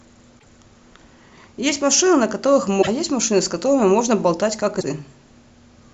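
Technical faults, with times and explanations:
0.38–0.45 s, 2.81–2.88 s and 4.80–4.84 s: broken MP3 bit reservoir. Each is a short mangled blip, about 40 to 70 ms, lasting a frame or three of roughly 26 ms. That frame length fits MP3 at 44.1 kHz. The speech lurches ahead across each one. Likely some frames were dropped, so the frames after each gap reached back into the reservoir for borrowed bits and decoded data from the wrong frame until the stream recovered.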